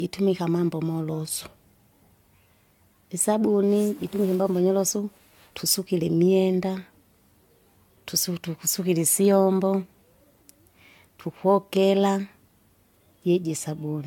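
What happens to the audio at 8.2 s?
At 8.2 s you're hearing generation loss, which runs through the whole clip. The speech sounds swirly, hollow and smeared, with soft attacks and nothing above 17.1 kHz, likely from re-encoding a few times with something like AAC-LC at 96 kbit/s, each pass requantising and stacking new holes.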